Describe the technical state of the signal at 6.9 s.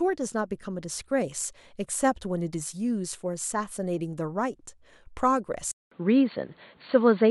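At 6.9 s the signal is in its degraded section, which runs from 5.72 s to the end of the clip. The sound is consistent with an input switched to a poorer device, likely a change of microphone or headset profile. A gap of about 0.2 s of silence marks the switch. Afterwards the band stops near 4.5 kHz, giving a dull, boxy tone. The level shifts by around 5 dB, and a new noise floor sits roughly 40 dB below the signal.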